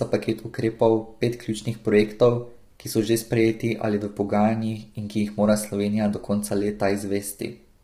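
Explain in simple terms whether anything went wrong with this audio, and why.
Yes, something went wrong: the speech was likely squeezed through low-delay AAC compression, the kind used on video calls, and squeezed hard. To keep delay short, this method slices sound into very brief chunks, which makes it poor at capturing the steady tones that give a voice its pitch. With so little data to spare, the voice comes out rough and grainy from start to finish, with a hiss between its tones and a dull or artificial-sounding top end.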